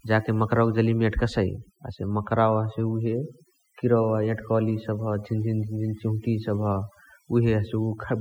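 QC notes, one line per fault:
throughout: overdone noise removal. The noise reduction on this one was pushed way too hard, so any frequency band that dips close to the noise floor gets pulled right down or switched off. That takes the quieter parts of the speech along with the noise. The gaps between phrases drop away, with little twinkly specks where stray bands keep popping on and off.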